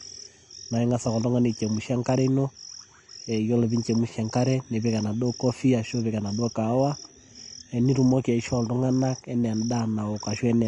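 Speech sounds hissy and grainy throughout, with nothing above 10.6 kHz. The likely cause is Vorbis compression at a low bitrate near 33 kbps, coarsely quantising treble detail into noise.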